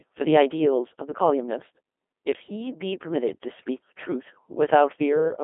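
From start to finish the speech has passed through a Codec 2 vocoder, most consistent with its 2.4 kbit/s mode. Only pitch, voicing, energy and a coarse spectral envelope survive, and the decoder rebuilds the voice from sine waves, so the original waveform is gone. The result is heavily robotic and buzzy, squeezed into a narrow line band of about 250 Hz to 3.5 kHz, with nothing at all above 3.8 kHz.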